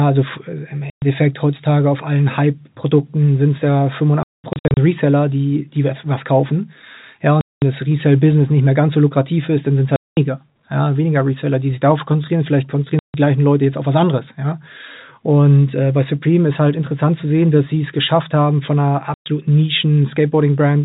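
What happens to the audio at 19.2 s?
At 19.14 s the sound cuts out completely until 19.26 s, a 120 ms hole caused by packet loss filled with silence. Packets carrying that stretch never reached the receiver, which played silence instead of concealing the gap. The length fits four consecutive 30 ms packets. Both edges are hard cuts in the waveform, set against the narrow G.711 telephone band.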